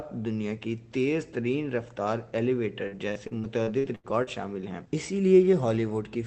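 From 2.87 to 4.30 s, repeated packet loss turns the sound choppy and robotic: eight holes, the longest about 82 ms, are patched by extending the last sound, so roughly a quarter of that stretch is synthetic. Unlike a single dropout or a silent gap, the missing pieces are filled, leaving a stuttering texture over a call-band signal limited to about 8 kHz.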